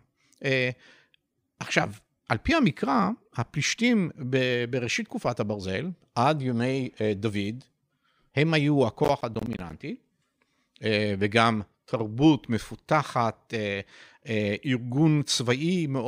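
Speech clip with processor overload crackle at 9.04–9.73 s: gritty tearing from tiny silent gaps, which fits roughly fifteen missed buffers of about 10 ms.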